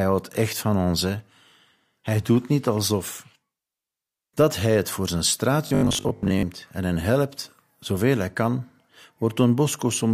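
It's a speech recording, and from 5.67 to 6.45 s, right after "hij het voor zijn" and up to "en hen helpt zoveel", the voice turns into a rigid, metallic buzz at about 50 Hz that still loosely tracks the words. That's robotic sound from repeated short buffers, likely caused by audio arriving too slowly, so the software keeps looping the last 20 ms or so. Roughly half the stretch is those repeats, with the real audio in between skipped.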